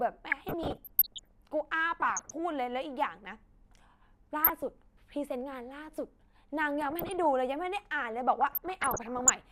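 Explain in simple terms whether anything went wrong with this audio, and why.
Weak digital radio reception caused DAB burbling at 0.32–1.31, 2.01–2.31, 4.44–4.70, 6.81–7.24 and 8.41–9.31 s. A few corrupted bits slipped past error correction, so bits of the speech's frequency range jump around briefly, giving short blips of noise.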